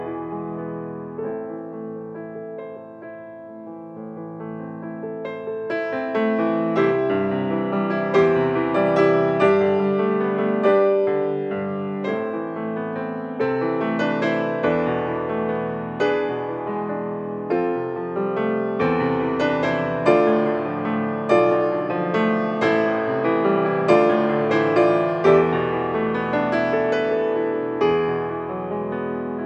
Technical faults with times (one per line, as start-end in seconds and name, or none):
none